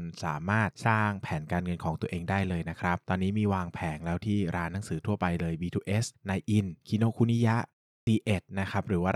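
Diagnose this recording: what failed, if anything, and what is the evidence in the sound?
At 7.98 s, speech snaps in after a 0.33 s pause with its first 91 ms missing. This is a clipped start after a pause: the playback device woke late from sleep.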